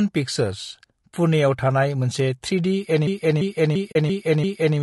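Speech runs through the whole clip with rough, grainy low-delay AAC compression. There is noise between the voice's harmonics and a thin, synthetic-sounding top band. The likely cause is AAC-ELD at a low bitrate, which fits about 32 kbps. The damage is plainly audible. From 3.07 to 4.78 s, a system hang loop takes over. One 341 ms piece of audio repeats exactly, five times, at 2.93 Hz. It sounds like a skipping record. The length fits a 16384-sample buffer cycling while the system froze. Inside that stretch, from 3.91 to 3.96 s, there is AAC frame loss with muting. A 40 ms hole opens, which fits two lost frames. The decoder zeroed their spectrum. The overlapping windows fade the sound out and back in, leaving a soft-edged gap.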